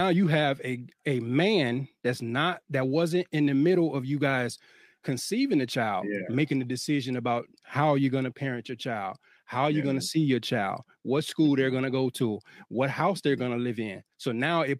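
A speech recording, and no technical fault can be heard anywhere in it. There is nothing to mark with a time or trace to a cause.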